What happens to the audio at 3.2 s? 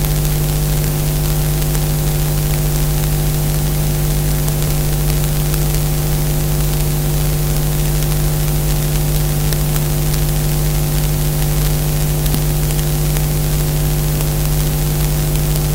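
At 3.2 s the integer overflow that runs through the whole clip is still active. The signal is pushed about 6 dB past the largest value the integer format can hold, and instead of being limited there, any sample that goes over wraps around to the opposite extreme of the range. Only a small fraction of samples cross that line, so quieter stretches pass cleanly. Each loud peak snaps into a harsh, violent crack, far sharper and more abrupt than ordinary clipping.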